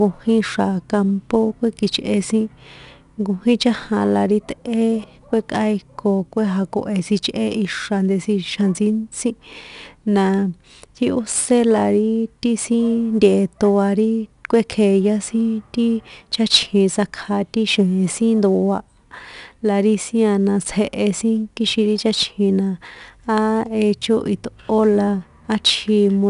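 4-bit ADPCM compression runs through the whole speech clip. Each sample is coded as a coarse 4-bit step from a running prediction, so a gritty hiss rides on every loud syllable and rises and falls with the level. Sharp onsets come out roughened where the step size lags behind. The coding damage is plainly audible, and nothing sounds above 10.6 kHz, which points to a low sample rate and a rate near 89 kbps.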